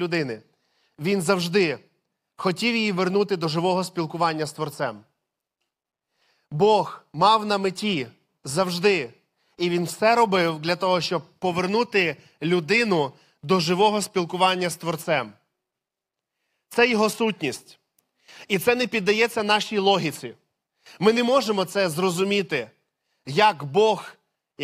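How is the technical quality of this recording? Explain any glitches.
No glitches or technical faults are audible anywhere in this speech recording.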